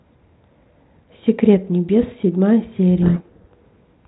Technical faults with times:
3.02-3.53 codec payload misread

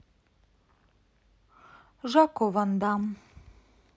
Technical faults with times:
2.83-3.97 drift correction step

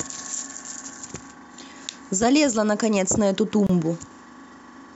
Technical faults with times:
3.67-3.69 gap at a join of encoded pieces

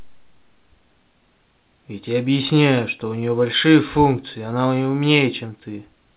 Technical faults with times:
none

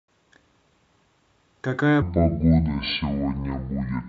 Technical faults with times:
2.02-4.08 section at the wrong speed

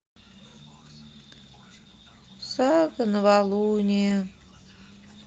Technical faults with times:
2.59-2.65 lost packet rebuilt from error correction
4.09-4.11 lost packet rebuilt from error correction

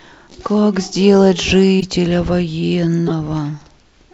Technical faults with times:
1.80-1.83 corrupt frame decoded
3.07-3.12 corrupt frame decoded

